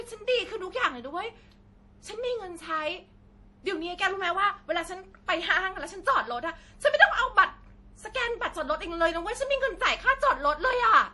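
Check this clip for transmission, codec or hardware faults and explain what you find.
One codec fault runs through the whole speech clip. Throughout, the speech sounds watery and swirly, s sounds chirp metallically, and nothing is heard above 11.5 kHz. This is likely MP3 compression at a bitrate around 48 kbps: short of bits, the encoder cut the treble and switched weak frequency lines on and off between frames.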